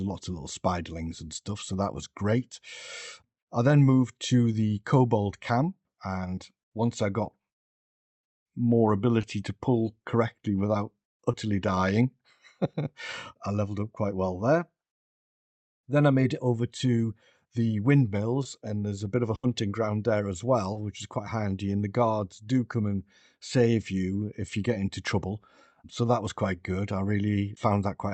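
At 6.35 s, just before "once I got", and again at 9.21 s, 11.31 s (after "to pull correctly without") and 18.43 s, short concealed packet loss leaves a brief smear or wobble. About 20 ms of audio never arrived, and the decoder bridged the hole by extending the preceding sound before blending back.

At 19.35 to 19.45 s, between "a bit of a" and "ground there as", a burst of packet loss drops roughly 80 ms. The receiver stretches the last sound into a fading buzz or hiss, then resumes further on with that stretch missing.

A final short concealed loss at 20.73 s gives the same brief smear. Throughout, the call codec's top end stops near 8 kHz, which fits an Opus wideband setting.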